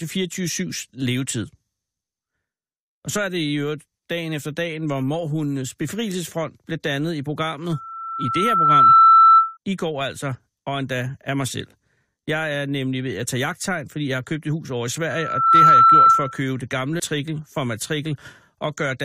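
Loudspeaker feedback squeal appears from 7.71 to 9.57 s and again from 15.09 to 16.42 s. The microphone is picking up its own loudspeaker, and at 1.3 kHz the loop gain passes one. A pure tone swells over about a second the first time and about half a second the second, rising to roughly 15 dB above the speech.

A stream segment skipped at 16.99 s. The speech jumps abruptly forward with a tiny blip, most likely because one chunk of the segmented stream failed to load and the player moved straight on to the next.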